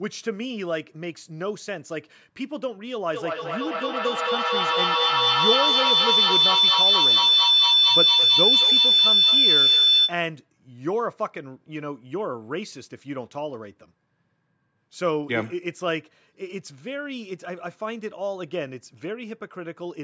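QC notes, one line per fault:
3.14–10.26 s feedback howl: a mic-to-speaker loop gaining on each pass builds a tone near 4 kHz, about 9 dB above speech, pulsing every 200 ms or so, a bright horizontal spectrogram band.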